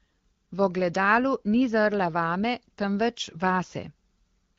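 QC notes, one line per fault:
No faults found in this speech.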